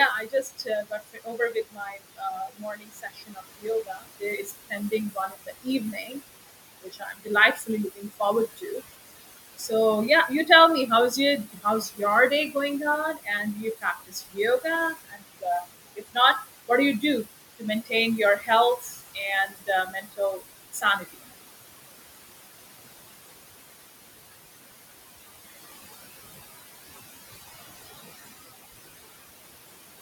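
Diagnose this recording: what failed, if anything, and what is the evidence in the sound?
The failure sits in call processing, where the noise suppressor is working too hard. Throughout the clip it pulls the background down by about 19 dB. The room noise, which sits only about 10 dB under the speech, drops away in the gaps and swells back under each phrase. These are classic noise suppressor artifacts from band-by-band gain that jumps frame to frame.

The same stage is also causing speech cut by the noise suppressor. With the noise that close to the speech level, the suppressor mistakes quieter parts of the speech for background and clamps them by about 22 dB at the deepest. The affected stretches run 0.11–6.16 s, 6.83–8.82 s, 9.57–9.72 s, 11.45–12.56 s, 13.14–15.65 s and 15.96–21.18 s. The worst is the opening stretch, where around four seconds in total sound swallowed or faint. The later ones are shorter, down to a brief dip at 9.6 s.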